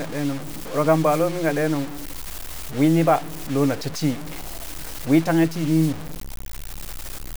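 Throughout the speech, quiet passages turn gritty and the quietest parts sputter or drop to silence, with grainy distortion that tracks the signal at roughly 15 dB below it. This low bit depth without dither is likely due to truncation to around 5 bits.

A wireless microphone noise hit occurs from 1.07 to 1.21 s, just before "lomin ka", and again from 5.78 to 5.91 s. Each time, the FM radio link fades and receiver noise swells into a short swish of static.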